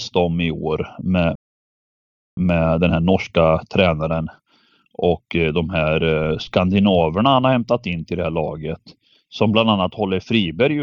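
Speech, with a playback stall from 1.35 s to 2.37 s: the sound halts mid-flow for about 1.02 s, and a waveform shows a flat, empty gap, a blank vertical band on a spectrogram. The player likely ran out of buffered data or had its output thread blocked. Time-compressed catch-up follows from 2.37 s to 5.37 s, where the speech runs about 1.1 times faster at unchanged pitch. On a spectrogram, harmonic spacing stays the same while syllables sit closer together, with small seams at the cross-faded cuts.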